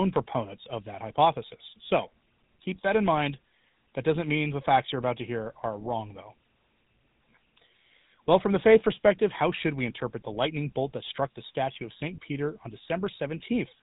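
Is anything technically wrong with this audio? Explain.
Yes. The speech carries GSM full-rate codec damage from start to finish. The codec models the vocal tract and drives it with a regular pulse train. It keeps only every third excitation sample. Nothing above 4 kHz survives. The plainly audible result is a buzzy, gravelly roughness over every syllable, with a dull, boxed-in top end. This character fits the 13 kbps rate of the original GSM phone codec.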